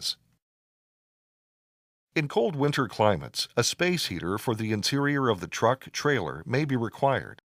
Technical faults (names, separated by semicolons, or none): short concealed packet loss